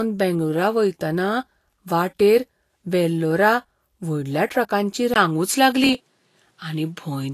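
From start to finish the speech sounds hissy and grainy, with plainly audible codec damage and nothing above 14.2 kHz. This is likely Vorbis compression, with treble detail quantised into noise and a lowered cut-off, consistent with a low bitrate of around 35 kbps.

At 5.14 s, right after "वाटेर वेल्लोरा व्हडल्या ट्रकांची", a 20 ms silence breaks the sound. From there to the end the band stops at 12.5 kHz, and a new background noise sits far below the speech at an unchanged level. The likely cause is the input switched to a poorer device with a narrower band and its own noise.

From 5.77 to 6.21 s a gritty crackle rides on the speech. This is processor overload crackle: repeated deadlines were missed and each buffer was skipped outright, leaving many tiny hard-edged gaps. The gaps fit very short buffers of under a millisecond each.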